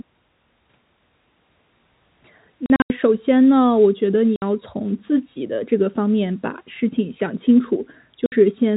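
From 2.66 to 2.9 s the speech breaks up through packet loss filled with silence: about 160 ms of audio drops out in scattered holes across a 240 ms stretch, the longest gap 80 ms. Shorter single holes of 60 ms follow at 4.36 and 8.26 s. Each gap is a whole multiple of 20 ms, which fits 20 ms packets, and the cuts have hard edges over the narrowband G.711 telephone coding.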